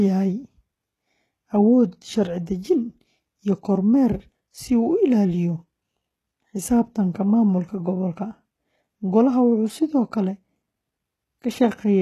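It's a speech clip with plainly audible codec damage the whole way through. The treble sounds rebuilt rather than real, s sounds come out gritty and lispy, and nothing is left above 12.3 kHz. That points to likely HE-AAC compression, consistent with a very low bitrate around 16 kbps.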